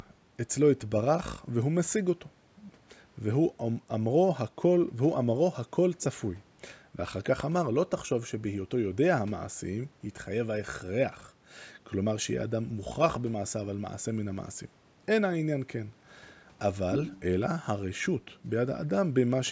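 No technical faults can be heard anywhere in the recording. The call microphone processing is audible as normal: the lowest bass is trimmed away and nothing reaches above 8 kHz.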